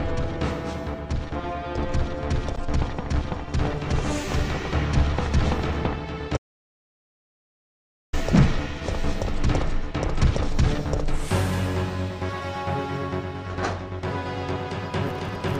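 At 2.56 to 2.60 s, and again at 5.63 s, a corrupt frame was decoded: damaged compressed data, about three frames and then a couple, was played anyway, putting energy at wrong frequencies. Each sounds as a brief chirp or noise burst.

From 6.36 to 8.14 s a playback stall cuts the sound off mid-flow for about 1.76 s, likely because the player ran out of data. Unlike a corrupt frame, it is pure silence rather than added noise, and far longer.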